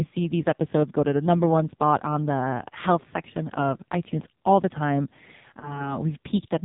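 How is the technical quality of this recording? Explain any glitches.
The recording is heavily degraded by low-rate mobile coding, with one brief dropout near the end.

AMR narrowband mobile codec, throughout: the speech passes through a vocal-tract model at 8 kHz sampling, so nothing above 4 kHz survives. The strong buzzy, synthetic character points to a very low mode, around 5.9 kbps, where few pulses per subframe remain.

Lost AMR speech frames, 5.60 to 5.92 s, right after "itunes all the time": the decoder filled a gap by repeating its last good pitch and vocal-tract settings at reduced gain. The brief dip and warble suggests a single lost 20 ms frame, with the voice returning slightly rough.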